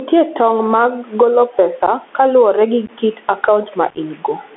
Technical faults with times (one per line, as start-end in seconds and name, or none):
0.00-4.57 gain pumping
0.00-4.57 Bluetooth CVSD headset codec
1.86-1.89 unconcealed Bluetooth headset packet loss
2.86-2.90 unconcealed Bluetooth headset packet loss
3.90-3.97 unconcealed Bluetooth headset packet loss